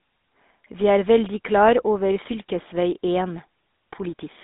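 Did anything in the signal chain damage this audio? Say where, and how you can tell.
Yes, at the codec stage: the GSM full-rate codec shapes the speech throughout, with a buzzy, gravelly roughness and nothing above about 3.8 kHz. The excitation is rebuilt from sparse regular pulses through a vocal-tract model at a low rate, which fits roughly 13 kbps.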